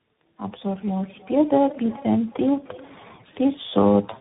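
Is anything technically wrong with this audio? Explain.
Yes. Tandem speech coding runs throughout the clip. The speech sounds as though it passed through three separate speech coders in a row, which fits a chain like AMR-NB, then iLBC, then CVSD. Each coder re-models audio already damaged by the one before, so their errors stack. The result is rough, muffled and warbly speech, with nothing above about 3.8 kHz.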